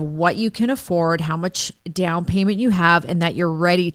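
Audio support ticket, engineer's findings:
No faults found in the speech clip. Opus voice compression working as expected, with full bandwidth and slight coding texture that fits hybrid mode at around 20 kbps.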